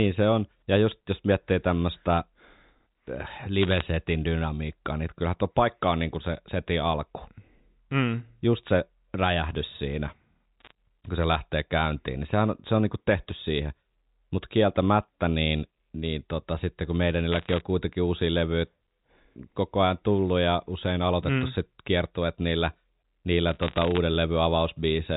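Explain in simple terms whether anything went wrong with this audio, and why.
Bit errors on a digital phone line flipped individual bits, corrupting single sound samples. You hear brief bursts of sharp ticking crackle over the speech at 3.61–3.82, 10.60–10.72 (right after "se räjähdys siinä"), 17.32–17.61 and 23.49–23.98 seconds.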